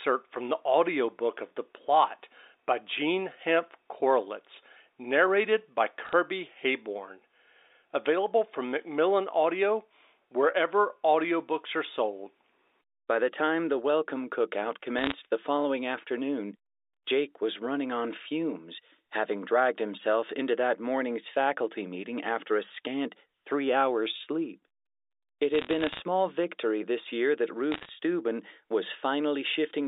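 Short bursts of sharp ticking crackle break into the speech at 6.05 to 6.13 s (after "narrated by"), 14.99 to 15.13 s (after "welcome cookout"), 25.55 to 26.00 s (before "victory this year that") and 27.72 to 27.89 s. These are bit errors on a digital phone line. Between about 0.3 and 1 percent of the bits on the narrowband G.711 A-law line flipped, and each hit corrupted a single sample.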